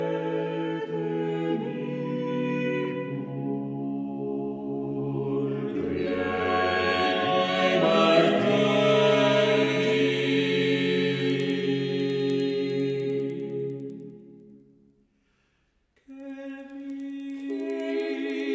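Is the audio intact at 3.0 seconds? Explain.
Yes, the audio is intact at 3.0 seconds, with no audible fault at that moment.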